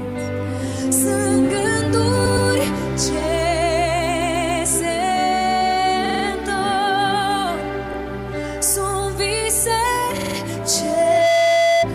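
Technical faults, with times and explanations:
2.25–2.48 s, 4.20–4.62 s, 6.04–6.23 s and 10.16–10.35 s: repeated frames. Short chunks replay, stuttering: 116 ms twice more, 139 ms three times more, then 46 ms four extra times in the last two.
10.50–11.88 s: loudspeaker feedback squeal. A 672 Hz tone swells over roughly 0.7 s to around 5 dB above the sound as the mic–speaker loop runs away at that frequency.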